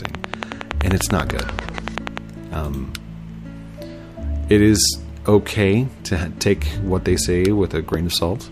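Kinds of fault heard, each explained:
Train of clicks: about twenty similar pops, evenly spaced near 10.4 per second until 2.19 s, standing well above the sound; likely interference, unlike random crackle.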